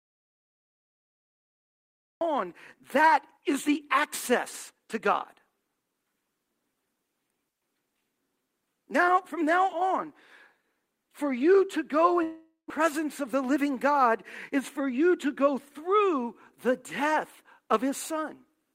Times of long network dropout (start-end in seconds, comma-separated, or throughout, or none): 12.23-12.72